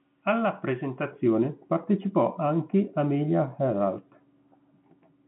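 From 1.11 s to the end, de-emphasis applied wrongly: an unneeded treble cut tilts the response down, about 11 dB at 10 kHz relative to 1 kHz, leaving the speech dull and muffled.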